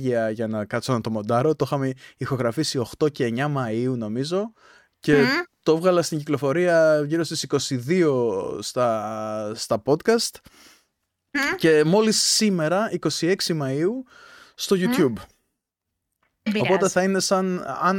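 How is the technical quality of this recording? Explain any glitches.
No technical faults or glitches are audible in this recording.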